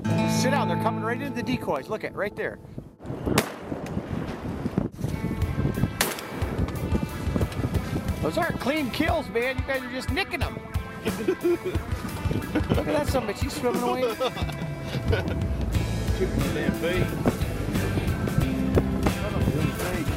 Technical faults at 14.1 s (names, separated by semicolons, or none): clock drift buffer slips